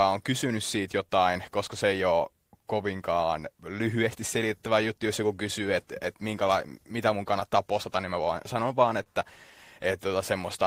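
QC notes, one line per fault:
Throughout: clock drift between sender and receiver. The sender's clock runs roughly 2% slower than the receiver's. The receiver's buffer keeps draining as a result. It has to keep making up time to stay in step. Small timing hiccups come and go across the whole clip. They appear at uneven gaps rather than on a regular beat.
0.48 to 10.09 s: repeated timing corrections. The receiver keeps repeating short pieces of audio to cover the slow sender. Every edit goes the same way, adding time. Together they stretch the speech to about 98% speed. In total roughly 150 ms is added. Each insertion is tiny and spaced unevenly.
9.03 to 9.08 s: short stall from a late packet. A packet arrived late and the jitter buffer ran dry. The receiver held the last sound for 28 ms until it came. Then playback resumed from the same point. No audio is lost. The delay grows by 28 ms. 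What you hear is one sound lingering too long, with a slight buzz or dip.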